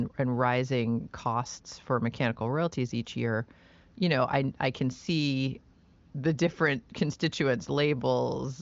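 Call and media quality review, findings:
No faults found; wideband HD Voice path sounds clear.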